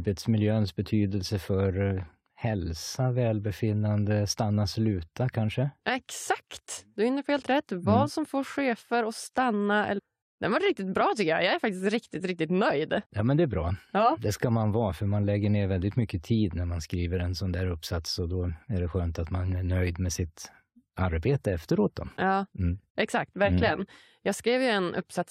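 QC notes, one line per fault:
9.97 to 10.00 s, stream segment skipped: there's a quick blip, only a couple of hundredths of a second, and then the speech just carries on from a later point, as if a piece of it got lost. That's likely a segment of the stream failing to load, with the player moving straight to the next one. The little click is the seam where the two unrelated pieces of audio butt together.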